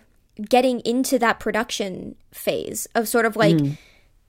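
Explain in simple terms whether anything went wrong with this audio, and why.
Nothing went wrong; I can't hear any faults anywhere in this recording.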